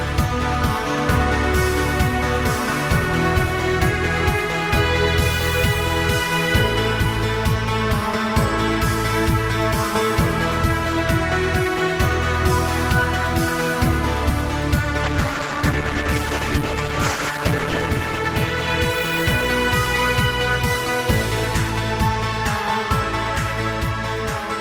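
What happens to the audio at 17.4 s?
At 17.4 s the audio is inside a call bitrate drop, from 15.06 to 19.45 s. The starved encoder codes coarsely and cuts highs. It sounds rough and muffled, consistent with a fall from 32 to 11 kbps.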